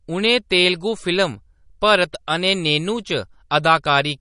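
From the first moment to the end, the speech carries plainly audible codec damage. Nothing is left above 10.5 kHz, so the top is dull and the s sounds lose their air. Faint detail flickers in and out between frames, giving a watery, swirling texture. Onsets sound smeared. The likely cause is MP3 compression at a low rate, which fits about 40 kbps. The encoder ran short of bits, cut the treble, and dropped weak frequency lines.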